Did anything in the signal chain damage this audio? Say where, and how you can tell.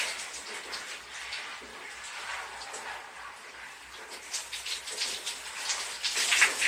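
No, nothing in the signal chain damaged this audio.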